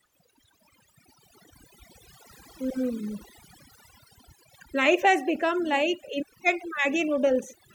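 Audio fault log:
Throughout, overdone noise removal: the denoiser was pushed so hard that frequency bands sitting close to its noise estimate are cut almost to nothing, taking quiet parts of the speech along. The background drops and breaks up into twinkling specks.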